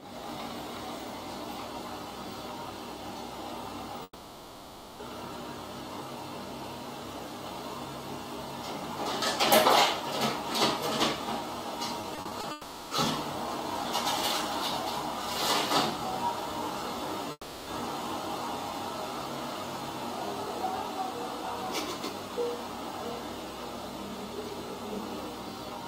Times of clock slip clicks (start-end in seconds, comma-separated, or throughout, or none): none